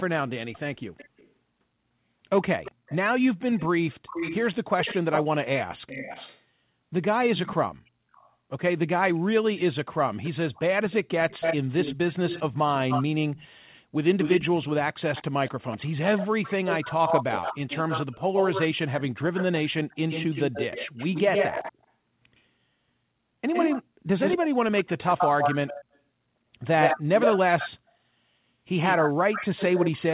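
Speech with a likely echo leak. A faint delayed copy of the speech returns at 0.53–1.31 s, louder at 2.64–6.46 s and 7.37–8.31 s (about 400 ms late), and nearly as loud as the speech at 10.23–22.41 s, 23.53–27.69 s and from 28.84 s (about 110 ms).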